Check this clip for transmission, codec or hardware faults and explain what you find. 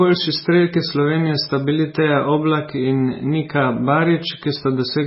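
One codec fault runs through the whole speech clip. Throughout, the speech sounds watery and swirly, with nothing above 5.6 kHz. This is likely heavy MP3 compression at a bitrate that fits roughly 16 kbps, which cuts the treble and drops weak frequency lines from frame to frame.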